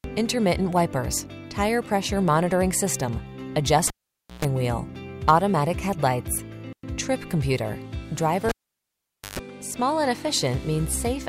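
At 3.88 s the cable gets pulled and plugged in: a pop, about half a second of near silence, then roughly 0.13 s of 60 Hz mains buzz while only the tip makes contact, and a second pop as the sound comes back at 4.45 s. It happens again from 8.49 to 9.39 s with a longer dropout of about 0.85 s, and this time the buzz sits at 50 Hz.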